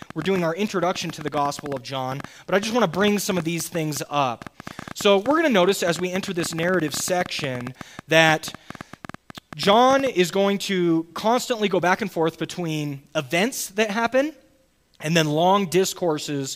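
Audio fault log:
0.02–10.08 s, train of clicks: about a hundred similar pops at roughly 9.4 per second, unevenly spaced and well above the sound, likely interference or a faulty connection or power supply.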